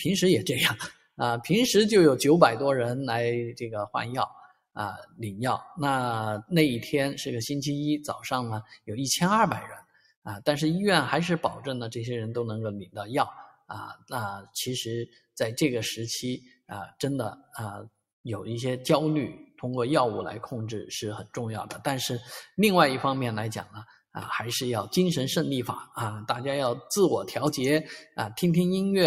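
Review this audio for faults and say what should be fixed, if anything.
The level breathes and flutters across the whole clip, with held and fading material sinking by around 5 dB while sharper onsets stay put. This is a noise suppressor applied to music or sounds: a speech-tuned suppressor is running on the full program, mistaking steady tones, ambience and decay tails for background noise and pulling them down. The gain keeps shifting as it re-judges what counts as noise, so the sound pumps and thins.

Eight brief holes open where the sound is cut by the noise suppressor: 0.89–1.20 s, 4.29–5.21 s, 8.63–8.89 s, 9.78–10.26 s, 13.5–14.55 s, 15.07–15.24 s, 16.39–17.0 s and 17.36–17.55 s. In each, sustained or decaying content drops away sharply, by about 19 dB at worst around 0.9 s and by about 12 dB at the mildest near 15.1 s. The suppressor has classed these passages as noise and clamped them harder than the surrounding audio.

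Disable the speech noise suppressor, or switch it to a music mode, whenever the input is anything other than speech.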